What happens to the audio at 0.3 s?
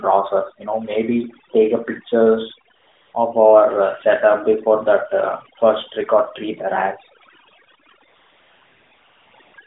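At 0.3 s, as throughout the clip, overdone noise removal is gating bands judged noise-like, leaving a lowered background broken into twinkling specks; a spectrogram shows scattered isolated blips between speech.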